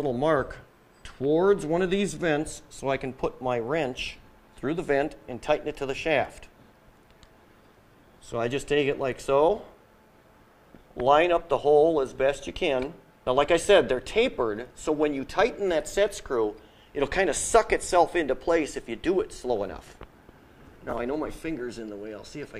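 At 20.90 to 20.92 s a brief jumbled blip interrupts the sound. This is chunks out of order: an 11.61 ms chunk played one chunk late, swapping places with its neighbour. Nothing is lost, but three hard joins result.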